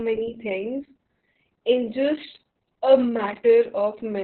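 Throughout the speech, Opus voice compression is heavy. The coder is running its SILK linear-prediction mode in narrowband, cutting everything above 4.2 kHz. The muffled, hoarse, slightly robotic quality, with coarsely rendered excitation, fits a bitrate around 6 kbps with long 60 ms frames. On a spectrogram, energy stops at a hard ceiling near 4.2 kHz, and harmonics below it look smeared and blocky rather than cleanly striated.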